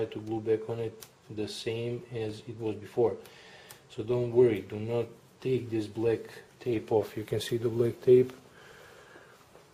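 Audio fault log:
No faults detected anywhere in the recording.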